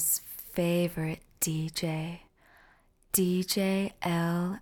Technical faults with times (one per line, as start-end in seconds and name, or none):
none